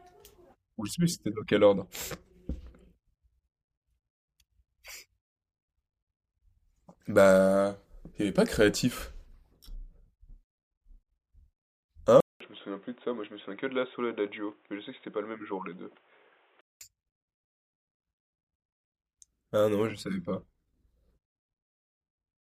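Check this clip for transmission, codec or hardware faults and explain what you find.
One hardware fault stands out. From 12.2 s to 16.8 s the speech turns dull and quieter by about 5 dB after a 200 ms gap. There is nothing above 3.8 kHz, and new background noise sits about 35 dB below it. This is likely an input switched to a poorer, narrower-band device.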